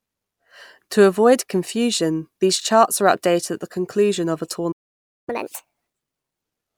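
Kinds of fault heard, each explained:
Playback stall: right after "the conclusion of a" the speech simply drops out, with the output going silent from about 4.71 to 5.29 s, so a gap of roughly 0.56 s. It's the kind of hole you get when the player runs dry or its thread gets held up. Most likely a starved buffer or a blocked thread, and the audio resumes as soon as data is flowing again.
Catch-up at higher speed: once the sound comes back at 5.29 s, it runs fast until about 6.41 s, at 1.5 times normal speed. The player is resampling through the backlog that built up during the gap, so everything is sped up and raised in pitch together, by around seven semitones, which gives that chipmunky lift. After that, speed and pitch drop back to normal.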